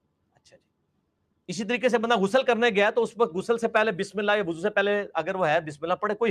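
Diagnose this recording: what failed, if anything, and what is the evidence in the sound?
Call processing: a noise suppressor built for speech was left on for music or general sound. It reads sustained parts as noise and ducks them, so the level pumps by roughly 5 dB throughout.

Between 0.02 and 1.49 s the sound is cut by the noise suppressor, dropping by up to about 19 dB for around a second in total.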